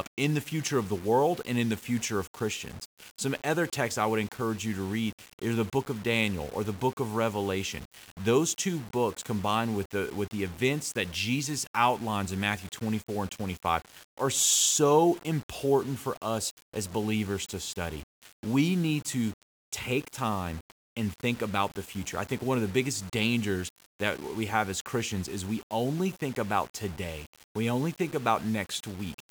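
From start to finish the speech carries a grainy, gritty distortion that moves with the voice, thickening on quieter syllables and making the softest tails break up into a sputter or drop out to silence rather than fade smoothly. The error sits roughly 20 dB below the speech. This is likely low bit depth without dither: the samples were rounded to very few levels, consistent with about 6 bits, so the error tracks the signal instead of forming a steady hiss.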